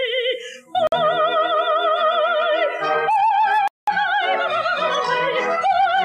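At 0.87 s the sound cuts to silence for 50 ms, and at 3.68 s for 198 ms, then resumes: a Bluetooth stall, likely from delayed packets emptying the headphone buffer.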